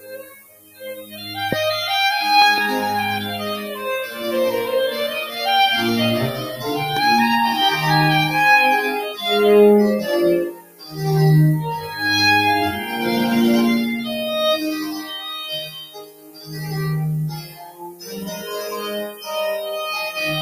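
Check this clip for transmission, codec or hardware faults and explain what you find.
Four kinds of fault are present: coarse quantisation with noise shaping, a speech noise suppressor acting on non-speech sound, repeated cuts by that suppressor, and loud pops.

Low bit depth with noise shaping runs through the whole clip. The audio behaves like a 6-bit signal. Rounding error is pushed toward high frequencies by feedback. The result is a steady, thin hiss that climbs sharply toward the top of the band. It sits only about 10 dB below the sound itself.

A noise suppressor applied to music or sounds is active throughout. It is tuned for speech and treats steady tones, ambience and decays as noise. Onsets pass while sustained parts and tails are pulled down. Level swings by roughly 10 dB as it opens and closes. The sound pumps and flutters and thins out between attacks.

The sound is cut by the noise suppressor at six points. 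These are 0.0 to 1.31 s, 10.49 to 11.0 s, 11.78 to 11.99 s, 14.95 to 16.74 s, 17.3 to 18.51 s, and 19.07 to 19.28 s. The suppressor took these passages for noise. The deepest drops reach about 15 to 18 dB in the longer spans. At 11.78 s and 19.07 s the dips are milder, about 6 and 8 dB. Held and fading material sinks or is cut short.

Loud pops occur at 1.52 to 1.55 s, 2.42 to 2.60 s, and 6.97 to 6.99 s. The 2.42 s event is a quick pair. Each is a sharp transient, about 15 to 20 dB above the surrounding level. The sound continues underneath. The likely cause is a sudden voltage step, such as a plug, a switch, static or a driver glitch. The downstream circuitry shapes it into a brief pop.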